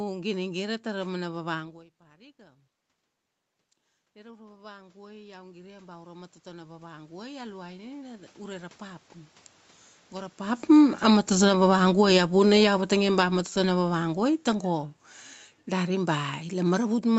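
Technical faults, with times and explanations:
4.13 to 9.09 s, automatic gain rising: after the voice drops by about 23 dB, the level climbs back gradually over five seconds, with the room noise swelling right along with the voice. The automatic gain control saw a quiet input and raised its gain by about 16 dB.
10.55 to 14.88 s, automatic gain falling: the speech sinks steadily over roughly four seconds, the background fading down with it. Finding the input too loud or its background noise too strong, the automatic gain control lowered its gain by about 10 dB, dragging everything down together.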